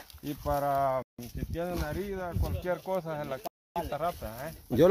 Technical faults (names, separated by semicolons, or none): Bluetooth stall